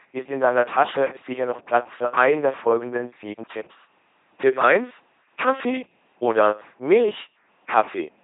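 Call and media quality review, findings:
LPC-10 vocoder, whole clip: buzzy, mechanical robot speech, hiss where voicing flips. Pulse-or-noise excitation through a low-order filter, consistent with 2.4 kbit/s. Spectrogram: rigid harmonic combs alternating with flat noise bands, nothing above 3.8 kHz; waveform: uniform pulse trains.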